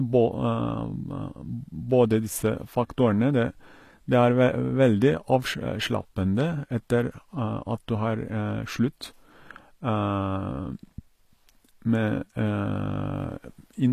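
Speech, and the whole clip carries the plainly audible grit of HE-AAC compression at what sounds like a bitrate around 24 kbps. The treble is likely rebuilt by band replication rather than coded, so s sounds come out lispy and metallic, with nothing above 14.9 kHz.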